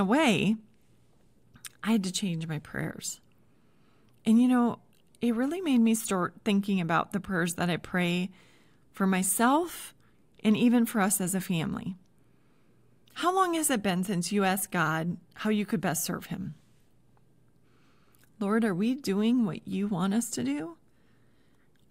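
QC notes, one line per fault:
Nothing to flag here; I listened across the whole speech recording and didn't catch a single problem worth noting.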